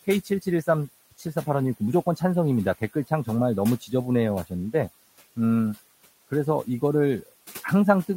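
Noise suppressor artifacts run through the whole clip. The suppressor pulls the steady room noise, which sits about 20 dB below the speech, down by about 17 dB frame by frame. What remains rises under speech and sinks in the gaps, unlike a fixed noise gate's clean on-off switching.

Speech cut by the noise suppressor follows at 0.24 to 0.47 s and again at 1.11 to 1.47 s. Here the suppressor mistook parts of the speech for noise and turned them down with the background, by up to about 11 dB and then about 14 dB. Each time, roughly a tenth of a second of sound comes out swallowed and faint rather than clipped or dropped outright.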